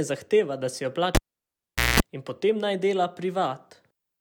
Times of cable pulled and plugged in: 1.15-2.00

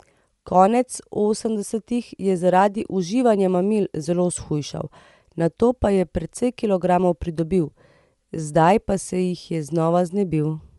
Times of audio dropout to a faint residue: none

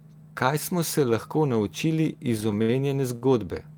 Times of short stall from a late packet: 3.15-3.23

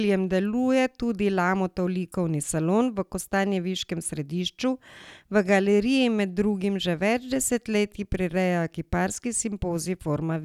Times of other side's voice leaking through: none

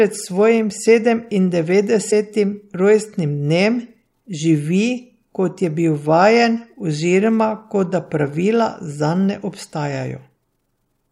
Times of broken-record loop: none

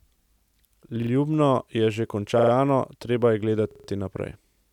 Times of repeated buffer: 1.02-1.11, 2.39-2.52, 3.71-3.88

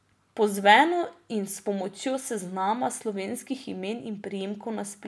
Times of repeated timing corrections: none

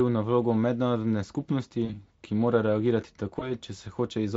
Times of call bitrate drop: none

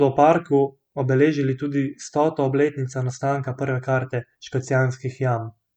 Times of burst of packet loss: none

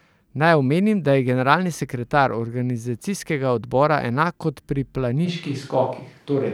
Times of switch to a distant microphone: 5.27-6.54

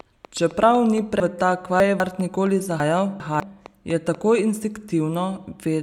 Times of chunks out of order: 1.20-2.00, 2.80-3.40

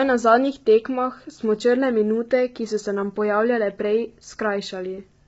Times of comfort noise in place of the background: none

